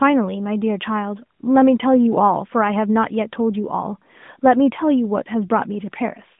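No faults in the speech: it sits in a narrowband mobile channel of roughly 150 Hz to 3.6 kHz with only light codec colouring, consistent with AMR-NB at its 12.2 kbps mode.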